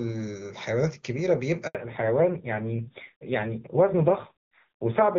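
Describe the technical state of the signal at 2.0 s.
At 2.0 s the signal is in a fallback to narrowband, which begins at 1.75 s and lasts to the end of the clip. Before that point the speech carries full HD Voice bandwidth, consistent with AMR-WB near 23.85 kbit/s. From 1.75 s everything above 4 kHz is gone, which fits a drop to AMR-NB at 7.4 kbit/s. The speech sounds duller and rougher. On a spectrogram, energy ends at a flat ceiling at 4 kHz from 1.75 s onward.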